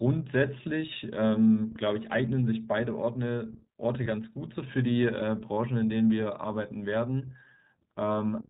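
Speech coded with the iLBC codec runs through the whole recording. The band stops at 4 kHz, and the coding damage is plainly audible as a rough, slightly synthetic edge. That fits the 20 ms frame mode at about 15.2 kbps. There are lost iLBC frames from 4.04 to 4.07 s, which fits a single dropped 20 ms frame. The decoder fills the gap by repeating the last pitch cycle with added noise, so you hear a brief buzzy, held vowel rather than silence or a click. The voice is right again almost at once afterwards, with none of the lingering distortion that codecs which depend on earlier frames would show.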